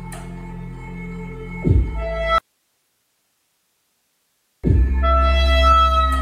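At 2.38 s there's an audio dropout to a faint residue: the sound cuts abruptly for about 2.25 s, leaving only low hiss, likely a lost signal with the path still live.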